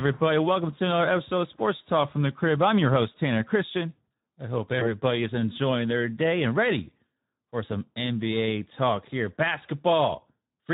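Throughout, the speech carries plainly audible Speex codec damage: the CELP coder has too few bits for its excitation, so the voice sounds noisy and hoarse, which fits a bitrate of about 11 kbps. On a spectrogram, harmonics look smeared and grainy rather than cleanly striated.

From 4.79 to 4.97 s, VoIP packet loss concealed by the speech codec appears. The decoder rebuilt the gap, which fits one lost 20 ms frame, from its last pitch and filter with falling gain. The result is stretched into a buzzy tone or coloured noise that fades, and the disturbance lingers until 4.97 s as later frames build on the guess. The waveform shows a smooth decaying patch, and the spectrogram shows frozen, repeated spectral texture.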